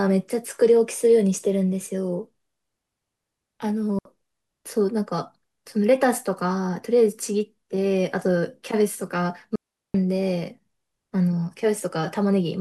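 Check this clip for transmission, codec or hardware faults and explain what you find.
Two digital wireless dropouts break up the speech, one from 3.99 to 4.05 s (about 64 ms) and one from 9.56 to 9.94 s (about 390 ms). Each time the receiver lost too much of the radio data stream and muted with a very quick fade. You hear a clean hole of near silence with no burst of noise on either side. The waveform flattens abruptly and the spectrogram shows a blank vertical gap.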